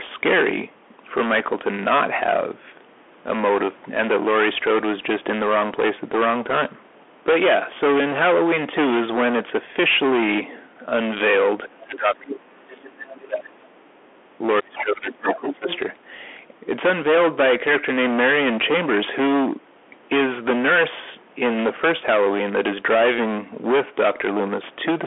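From start to finish the speech is hard clipped. It is driven about 19 dB past what a stage could pass, so around a fifth of the waveform has its peaks sliced flat. The flat tops throw off harmonics that turn every loud syllable into a harsh fuzz, not occasional crackle. Because the distortion follows loudness and appears instantly on each peak, it differs from codec grit, which sits under quiet passages too.

Throughout, the sound also carries the signature of the Bluetooth CVSD headset codec. Nothing survives above about 3.8 kHz, and the usable line band runs roughly 250 Hz to 3.4 kHz. This points to the 64 kHz one-bit delta scheme used on headset links, whose adaptive step cannot keep up with fast, loud high content. The codec damage is plainly audible: a granular hiss under the speech and scratchy s sounds. That steady hiss and band limit set it apart from clipping. The missing lowest bass comes from the call's microphone high-pass filter, which is expected.

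From 11.67 to 12.87 s, 13.12 to 13.84 s and 14.6 to 15.68 s the talker's level collapses in patches, by roughly 25 dB at the deepest. Each stretch has around a second of affected audio, apart from the middle one at around 0.7 s. This is likely speech suppressed in double talk, where an echo canceller mistakes the talker for loudspeaker echo and turns both down. The drops track the overlapping audio, which separates them from network dropouts.

Interleaved with those dips, a second voice leaks through: the other side's voice leaking through the microphone. It runs from 12.71 to 13.13 s at about 20 dB below the talker, is a brief scrap from 14.77 to 14.84 s at about 15 dB down, and is strongest from 15.27 to 15.78 s at about 5 dB below. The likely cause is residual loudspeaker echo left by the canceller. It is a distinct second voice, unlike the talker's own reverberation.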